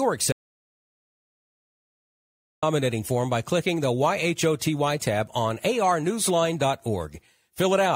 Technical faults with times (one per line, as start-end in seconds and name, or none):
0.32-2.63 audio dropout to silence